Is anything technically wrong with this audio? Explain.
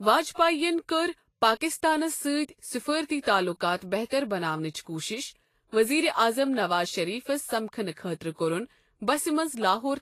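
Yes, there's a problem throughout the speech. It's likely Vorbis compression, fitting around 32 kbps: nothing above 14.2 kHz, and coarsely quantised treble turns detail into plainly audible grainy hiss.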